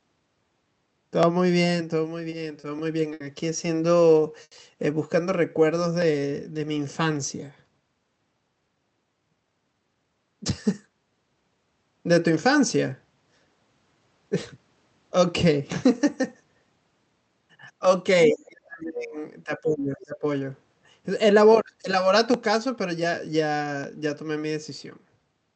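From 1.23 s to 25.34 s, two devices running on separate clocks, likely differing by a few hundred parts per million, let the buffer between them drift until a small block of samples slips. These clock drift buffer slips come every 1.5 s, about fifteen in all, each a brief click in the speech.

Short stalls from late packets occur at 2.29 s and 2.60 s (30 ms each), 3.13 s (70 ms) and 4.44 s (80 ms). Each time the jitter buffer ran dry, so the receiver held the last sound until the packet arrived. Nothing is lost, but a syllable hangs on too long.

From 5.22 s to 6.62 s the jitter buffer slowed playback to rebuild its reserve, repeating pitch periods to add 104 ms. The speech runs at 93% speed without any change in pitch, so sounds are drawn out.

From 18.33 s to 19.16 s and from 19.45 s to 20.25 s, the talker's speech dips sharply, by about 35 dB at its deepest in the first stretch and about 20 dB in the second. 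This is speech suppressed in double talk: the echo canceller likely could not separate the near talker from the loudspeaker echo and turned both down.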